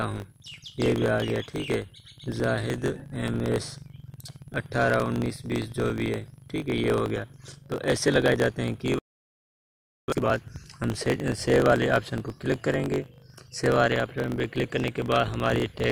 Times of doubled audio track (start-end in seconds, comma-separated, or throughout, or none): none